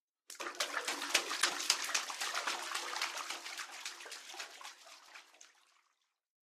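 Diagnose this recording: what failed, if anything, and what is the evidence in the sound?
Driver or buffer stage: a small forward jump in the sound at 0.88 s and 5.08 s, each skipping about 20 ms, likely a dropped buffer (overrun) where unread samples were overwritten.

Codec stage: a corrupt frame decoded produces misplaced spectral energy, heard as a loud chirpy burst from 1.39 to 1.53 s and a fainter blip from 4.27 to 4.36 s.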